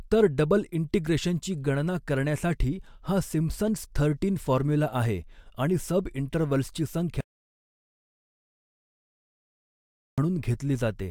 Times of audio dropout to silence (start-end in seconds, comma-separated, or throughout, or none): 7.21-10.18